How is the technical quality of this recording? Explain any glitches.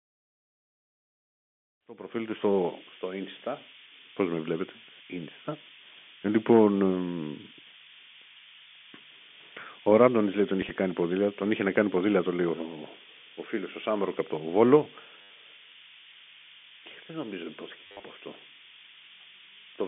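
The technical quality is poor: a loud hiss runs through the whole recording, and the speech stutters briefly three times.

Low bit depth with noise shaping is present from start to finish, including through the fade-in that completes around 2.8 s. The audio is stored with only 4 bits, and the rounding error is fed back so that its energy is pushed toward high frequencies. The result is a steady, thin hiss only a few dB below the speech. Even within the narrow telephone band, roughly 200 Hz to 3.5 kHz, the hiss climbs noticeably toward the top.

Packet loss with last packet repeated occurs at 10.62 to 10.70 s, between "λέει τον" and "κάνει ποδήλατο", at 15.22 to 15.30 s, and at 17.87 to 18.03 s, right after "νομίζω υπόθηκε". Each time, the receiver replays the last good chunk of audio to fill the gaps. The first event loses 30 ms, scattered over 80 ms. The second loses a solid 80 ms. The third loses 130 ms within 160 ms, with runs up to 50 ms. 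The longer runs produce a robotic buzz near 100 Hz, which fits 10 ms packets.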